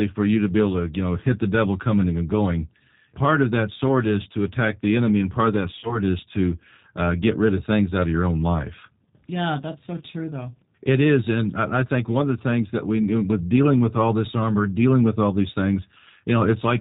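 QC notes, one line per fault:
Throughout, G.729 codec: the speech sounds like G.729A at 8 kbit/s, rebuilt from a vocal tract filter, a pitch predictor and a few pulses per subframe. Nothing gets through above 4 kHz, so it's dull and a bit rough and synthetic, and the codec damage is plainly audible.
5.79 to 5.98 s, VoIP packet loss concealed by the speech codec: about 40 ms of audio went missing, which points to two lost packets. The decoder stretched its last pitch and filter into a fading buzzy tone or coloured noise, and things stay weak and smeared until nearly 6 s.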